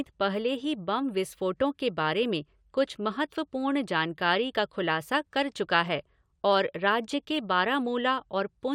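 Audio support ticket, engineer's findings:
Listened to the whole speech recording and found nothing wrong in it, so there's nothing to trace here.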